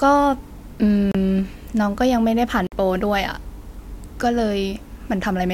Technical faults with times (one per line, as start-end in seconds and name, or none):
1.11-1.15 Bluetooth stall
2.67-2.72 Bluetooth stall